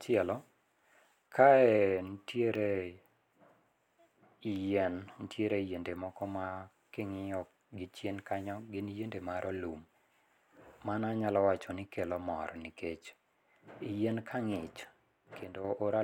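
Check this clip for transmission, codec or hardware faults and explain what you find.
Two faults are audible in this speech clip.

From 0.55 s to about 14.56 s, regular ticks recur every 2.0 s, heard only under signal. These are periodic USB or driver dropouts: a recurring block on the bus or driver loses a sliver of audio, far under a millisecond, and leaves silence in its place.

Between 15.43 s and 15.65 s the level abruptly falls by about 6 dB, then recovers. This is likely one channel dropping out: with one stereo side gone, the mono sum keeps only half of the shared content, hence the sudden 6 dB dip.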